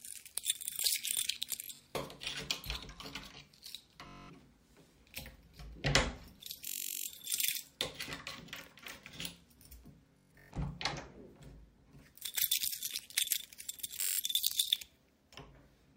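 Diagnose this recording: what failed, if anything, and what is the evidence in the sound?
Bluetooth stutter on the wireless link: at 1.64, 4.07, 6.68, 10.18 and 14.02 s the sound buzzes as short slices repeat, lasting about 0.2 to 0.4 s each. Lost or late packets made the receiver replay its last buffer, which fits roughly 21 ms frames, then resume further on.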